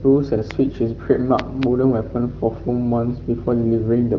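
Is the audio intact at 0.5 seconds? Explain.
No. A loud pop at 0.51 to 0.53 s, likely a voltage spike, spikes about 15 dB over the speech: a sharp waveform spike, a full-height vertical stripe on a spectrogram.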